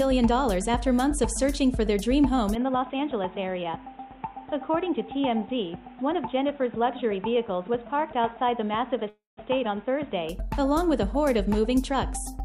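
At 2.55 s the recording most likely switched its input to a poorer device, such as a second microphone or a headset's call profile, and stayed on it until 10.29 s. There is no gap at either change. The new path passes nothing above 3.8 kHz, so the sound turns dull and boxy, drops by about 5 dB, and carries its own noise floor roughly 30 dB below the signal. At 10.29 s the full, brighter sound returns.

Within that stretch, at 9.09 s, there is a call audio freeze lasting until 9.39 s, likely because delayed packets left the jitter buffer empty. The receiver carries the last sound forward as a fading buzz or hiss, which then gives way to about 160 ms of silence before the audio resumes where it stopped. The 278 ms gap is added rather than cut, so nothing is lost, but everything after it arrives 278 ms later.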